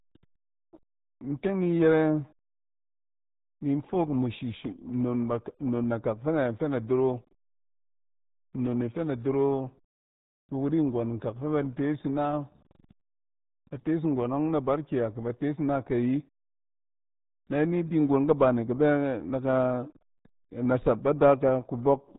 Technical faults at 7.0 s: RealAudio 14.4 codec

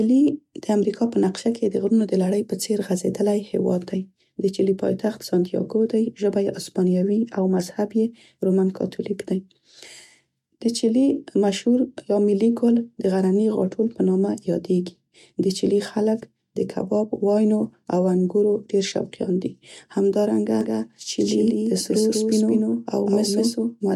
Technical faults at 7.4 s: none

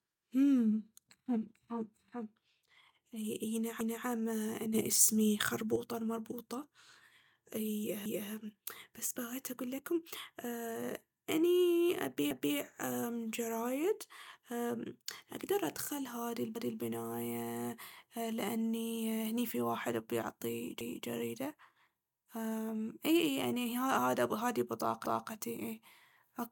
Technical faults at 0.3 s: none

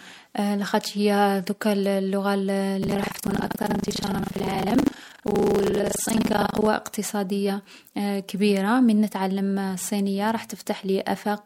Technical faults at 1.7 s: none

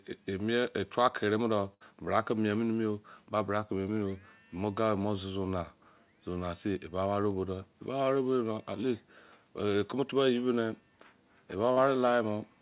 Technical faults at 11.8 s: short concealed packet loss

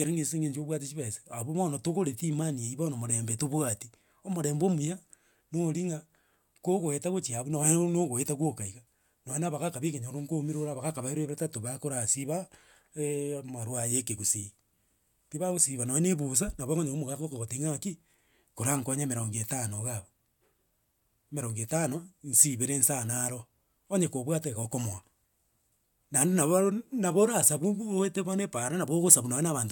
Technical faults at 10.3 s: none

